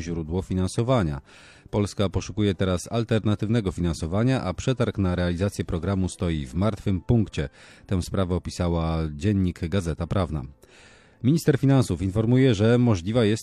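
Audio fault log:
No faults heard.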